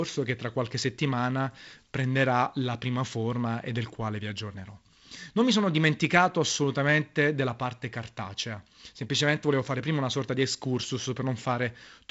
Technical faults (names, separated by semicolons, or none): none